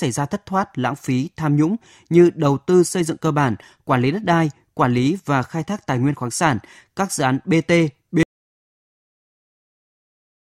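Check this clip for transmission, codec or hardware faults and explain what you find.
One fault is present. Audio dropout to silence from 8.23 s to the end: the input was likely lost, leaving silence with no room tone where the speech abruptly cuts off.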